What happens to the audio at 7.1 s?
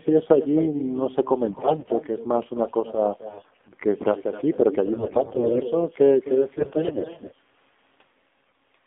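AMR bit errors are under way at 7.1 s, within a burst running from 6.58 to 7.35 s. On a weak radio link, the less protected bits of the AMR frames arrived corrupted while the checksum on the critical bits still passed, so the frames were decoded rather than discarded. With something like a tenth of those bits wrong, the excitation pulses land in the wrong positions and the fine pitch, gain and spectral values drift. The speech keeps roughly its level and pitch but turns hoarse, scratchy and gargly.

Underneath this, and present across the whole clip, is the AMR narrowband mobile codec. The line passes only about 200 Hz to 3.6 kHz, so the speech has the boxed-in telephone sound with no top end. The encoder models the vocal tract and drives it with a few pulses per subframe, and at a low rate, which fits the 7.4 kbps mode, the result is plainly buzzy and synthetic.

There is also echo with no canceller throughout. 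The far end's loudspeaker output re-enters its microphone and returns uncorrected, so the speech around 7.1 s is shadowed by a thinner copy about 13 dB down, arriving roughly a third of a second later.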